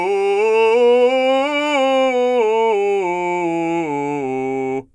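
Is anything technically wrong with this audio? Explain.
No, nothing in this music stood out as a technical problem on listening.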